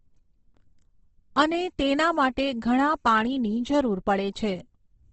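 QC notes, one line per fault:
Throughout, Opus compression: the speech sounds grainy and rough, with plainly audible codec damage and nothing above 8.2 kHz. The likely cause is Opus music (CELT) mode at a rate fitting about 16 kbps, which fills bit-starved bands with folded or noise-like energy.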